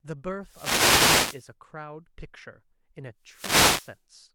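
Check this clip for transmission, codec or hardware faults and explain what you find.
Two wireless microphone noise hits, from 0.40 to 1.52 s and from 3.20 to 4.02 s. In each, the analogue FM radio link from the microphone to the receiver weakens as reflected copies of the signal arrive out of step and partly cancel. With less carrier to lock onto, the receiver's own noise comes up, and the speech is briefly joined by a rushing swish of static lasting about 1.1 s and 0.8 s respectively.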